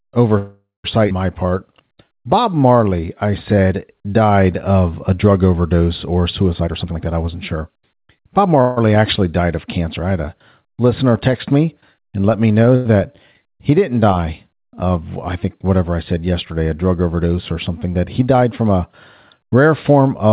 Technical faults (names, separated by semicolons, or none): call audio freeze; skip ahead; jitter buffer slow-down; jitter buffer speed-up; short stall from a late packet